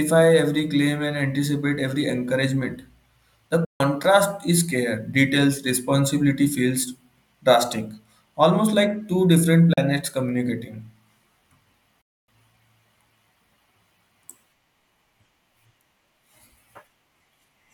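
The speech cuts to silence at 3.65 to 3.81 s, 9.73 to 9.78 s and 12.01 to 12.29 s, gaps of about 149, 37 and 261 ms with abrupt edges, then resumes further on. This is likely a Bluetooth dropout, where late packets were discarded.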